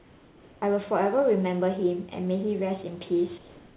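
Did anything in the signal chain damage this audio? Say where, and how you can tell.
Yes. From 0 to 0.62 s and again from 3.38 s to the end, the room background gives way to a smooth, featureless hiss, about 3 dB and about 2 dB quieter respectively. This is likely comfort noise in place of the background, produced when the call sender's voice detection stopped transmitting during pauses and the receiver synthesised noise. On a spectrogram those stretches show a uniform, textureless wash below the 4 kHz band edge, and the waveform floor steps slightly down.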